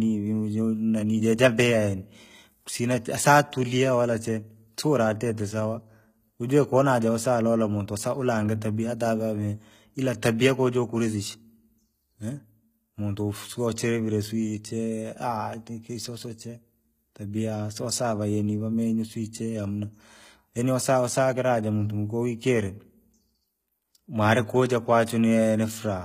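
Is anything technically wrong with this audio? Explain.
Yes. HE-AAC compression runs throughout the speech, with plainly audible codec damage. The likely cause is HE-AAC v2 encoding at a low rate, consistent with about 20 kbps: only the lower spectrum is properly coded, and the treble is regenerated by copying lower bands upward under a coarse envelope. The top end still extends to about 21.4 kHz, but its harmonics don't line up with those below, so sibilants come out gritty, metallic and lispy.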